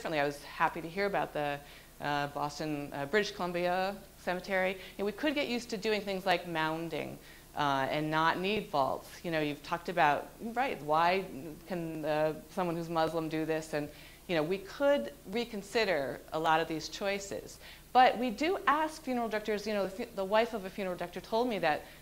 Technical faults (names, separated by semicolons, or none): clock drift buffer slips